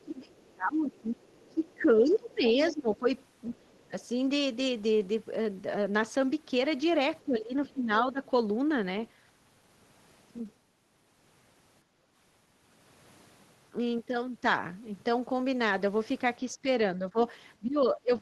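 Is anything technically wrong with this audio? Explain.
Yes, there are three kinds of echo-canceller fault in this speech clip.

Speech suppressed in double talk occurs from 0.02 to 3.93 s, from 7.24 to 8.2 s, and from 16.53 s to the end at 18.21 s. The talker's level sinks by as much as about 25 dB in the first stretch, for roughly three seconds in total, and by about 15 dB in the later two. The likely cause is both ends talking at once, so the canceller could not tell near speech from loudspeaker echo and attenuated everything.

The other side's voice is leaking through from 1.4 to 2.72 s, sitting about 15 dB below the talker, and again faintly from 3.68 to 3.9 s at about 35 dB down. A second, weaker voice can be heard behind the main one. This is likely residual echo: the far end played over the loudspeaker, reached the microphone, and was not fully cancelled.

Background gated by the echo canceller happens from 11.84 to 12.13 s. 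The room ambience dips by about 7 dB for roughly 0.3 s and then returns. The canceller clamped the microphone down hard while the loudspeaker was active, taking the background noise with it, and released once playback eased.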